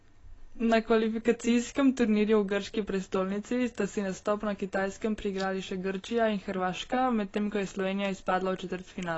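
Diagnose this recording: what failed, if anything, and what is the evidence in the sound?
The codec stage is at fault: the speech carries AAC compression damage from start to end, plainly audible as a dull, smeared tone with a fizzy, warbling edge on sibilants. On a spectrogram the energy stops at a flat ceiling near 7.9 kHz, with patchy holes and noisy blotches in the upper bands. The likely cause is an AAC-LC encode at a low bitrate, which fits roughly 24 kbps, starving the quantiser so high bands are dropped or noise-filled.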